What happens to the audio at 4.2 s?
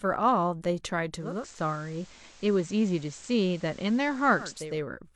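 At 4.2 s the receiver is still in a digital radio blend to analogue. It lost the digital stream and cross-faded over about half a second to the station's FM broadcast, which carries the audio from 1.13 s until the blend back ending at 4.84 s. The FM path adds a faint hiss that sits well below the speech. The level does not change.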